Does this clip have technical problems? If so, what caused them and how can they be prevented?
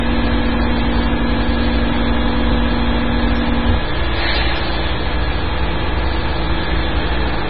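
Yes. Throughout the clip, the sound is cut off sharply above 5.4 kHz and carries a heavy watery, swirling texture. This is likely MP3 compression at a very low bitrate, consistent with around 16 kbps. Starved of bits, the encoder discards the treble at a fixed point and drops weaker frequency lines that flicker in and out from frame to frame. A simple low-pass filter or reduced sample rate would dull the top just as cleanly but without that swirl. To prevent it, keep the audio uncompressed or encode MP3 at 128 kbps or higher.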